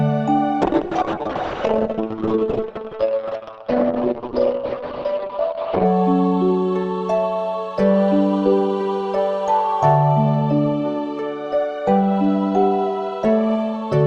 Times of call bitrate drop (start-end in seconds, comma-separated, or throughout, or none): 0.62-5.91